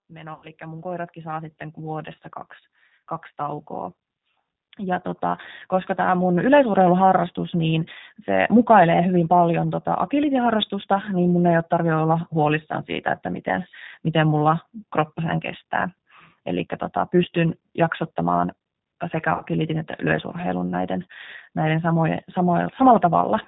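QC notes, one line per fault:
Throughout, G.729 codec: the whole clip carries that gritty, slightly synthetic edge, which fits G.729A at 8 kbit/s. Each 10 ms frame is rebuilt from a vocal-tract filter, a pitch predictor and a handful of pulses rather than the real waveform, so the speech stays clear but sounds rough and synthetic. The codec also removes everything above 4 kHz, so the top end is gone.
0.08–2.29 s and 4.76–6.87 s, automatic gain rising: twice the level creeps up over roughly two seconds, by about 10 dB the first time and about 7 dB the second. The AGC decided the input was too quiet and raised its gain slowly rather than in one jump. Because it scales the whole signal, the speech and the background noise swell up together.
0.34–0.49 s and 19.34–19.45 s, VoIP packet loss concealed by the speech codec: the first gap covers 90 ms of missing audio, which fits three lost packets. 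The second covers 60 ms, which fits two. In both places the decoder repeats its last pitch and filter and lowers the level frame by frame, so the sound smears into a fading buzzy tone or coloured noise. Each frame builds on the previous one, so the speech stays thin for a moment after the packets come back.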